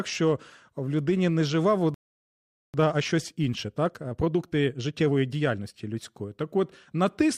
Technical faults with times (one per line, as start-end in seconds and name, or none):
1.94-2.74 playback stall
2.74-5.74 time-compressed catch-up